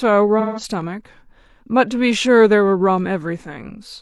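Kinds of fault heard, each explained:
AAC frame loss with concealment: around 0.39 to 0.63 s a chunk of the coded stream goes missing, roughly 171 ms of audio, which fits about four AAC frames. The decoder doesn't leave a hole. It rebuilds that stretch from the last good spectrum, so instead of a dropout you hear the speech go smeared and a bit phasey and noisy for that moment before the real signal picks back up.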